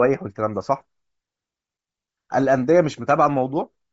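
Right through the speech there's plainly audible Bluetooth LC3 compression: upper frequencies sound breathy and grainy, likely from a roughly 32 kbps link with short 7.5 ms frames.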